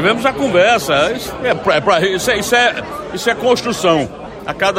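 No technical faults are audible anywhere in the sound.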